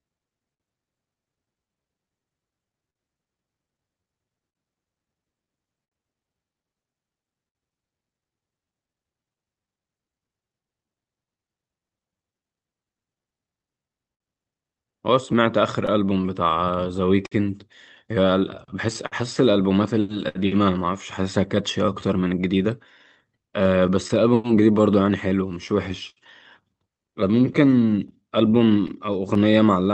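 From the very start the speech carries a faint, uneven drag, with small hiccups recurring at irregular spacing to the end. This is clock drift between sender and receiver. The sender's clock runs about 5% slow, so the receiver's jitter buffer keeps draining.

Across the same span, 0.01 to 29.84 s, the pacing sounds slightly stretched, at around 98% speed. These are repeated timing corrections: the receiver keeps repeating short slices to stay in step, adding well over half a second in total.

Between 0.54 and 10.09 s, roughly ten brief ticks and smears break into the sound, none much longer than 70 ms. These scattered short gaps come from late or lost packets, each patched by carrying the preceding sound forward.

From 14.14 to 29.55 s the same smears return more densely, about thirty of them, again up to roughly 70 ms and concealed the same way. Underneath, the call codec path adds its usual coding noise, and the top end stops near 8 kHz.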